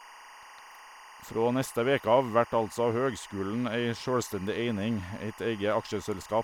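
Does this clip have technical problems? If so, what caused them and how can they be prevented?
Yes. A steady chirping warble, about 20 dB down and flipping near 1 and 2 kHz, runs throughout the speech. This is timecode bleed: linear timecode, probably at 23.976 fps, leaking in from an adjacent track or cable. Prevent it by routing timecode on separate shielded cables and tracks, well away from audio lines.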